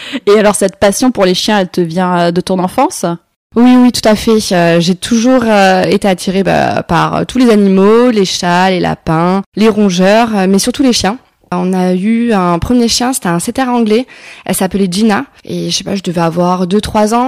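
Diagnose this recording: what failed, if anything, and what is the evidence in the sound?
Hard clipping runs through the whole speech clip. The signal was driven about 11 dB past what a converter or fixed-point sample format could hold, so every loud syllable has its peaks sheared flat, and roughly 7 percent of samples were cut off at that limit. It sounds like a harsh fuzz on each stressed sound rather than occasional crackle. On a waveform the peaks are squared-off plateaus. A spectrogram shows dense harmonic energy smeared far up the spectrum on every loud segment.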